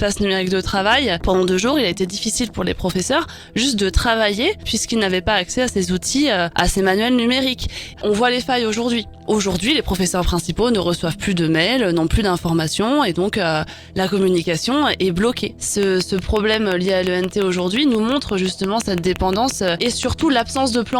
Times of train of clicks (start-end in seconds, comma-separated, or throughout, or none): 15.83-20.94